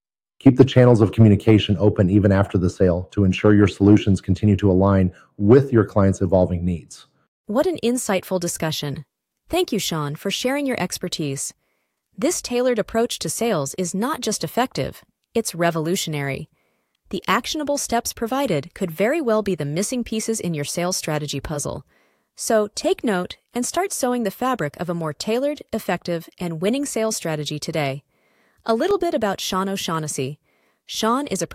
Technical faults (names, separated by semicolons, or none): CD scratch ticks